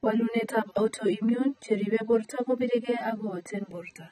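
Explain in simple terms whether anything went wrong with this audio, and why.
Throughout, the speech was likely squeezed hard by AAC compression, which throws away detail, so it sounds dull and fizzy, with nothing above 14.6 kHz.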